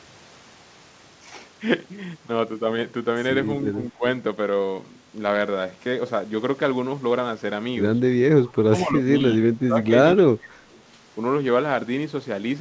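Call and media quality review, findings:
Speech suppressed in double talk: brief shallow dip near 3.94–4.03 s (about 10 dB), then choppy deep cuts 8.53–9.77 s and 10.06–10.57 s (about 25 dB). Likely the echo canceller mistaking near-end speech for loudspeaker echo and ducking both. Band stops at 8 kHz, which fits a G.722-type wideband codec.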